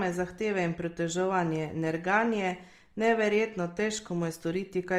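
Throughout the speech, Opus compression is plainly audible: bands starved of bits are refilled with folded or noise-like energy, so tones turn rough and grainy, which likely fits the CELT music mode at about 24 kbps. A spectrogram shows a full but speckled upper spectrum.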